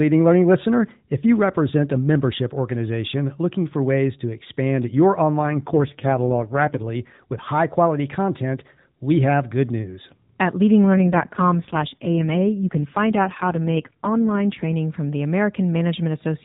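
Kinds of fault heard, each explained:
AMR rate drop: the radio link weakens, and the network pushes the AMR-NB coder down to a much lower mode, spending bits on error protection instead of the voice. The speech turns rougher, buzzier and more synthetic from 5.40 to 6.84 s, after "ways to expand your" until "with high quality content", and again from 10.84 to 14.74 s, up to "from the". There is no gap or band change, which fits a fall from 12.2 to 4.75 kbps.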